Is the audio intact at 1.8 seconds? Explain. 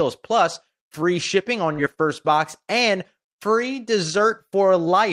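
No. A burst of packet loss runs from 1.73 to 1.80 s. The receiver stretches the last sound for about 46 ms and fades it, heard as a held buzz or hiss. Then about 40 ms of audio is simply missing.

Overlapping this, from 1.78 to 1.92 s, is a lost packet rebuilt from error correction. About 80 ms, which fits four short packets, is played from low-bitrate copies carried in the following packets. There is no gap, but that stretch sounds rougher and noisier.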